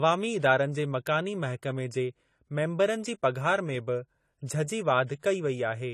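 AAC compression runs throughout the speech, with plainly audible damage and nothing above 14.1 kHz. The likely cause is AAC-LC coding at a low bitrate, around 32 kbps, which starves the upper bands of bits so the top is cut away and the remaining detail turns dull, smeared and warbly.

Pre-echo appears at 4.46 to 4.48 s and again at 5.07 to 5.09 s, spreading about 24 ms and 26 ms ahead of sharp onsets. The codec's quantisation noise, sized for the loud attack, leaks into the quiet instant before it, producing a brief hiss and a softened attack.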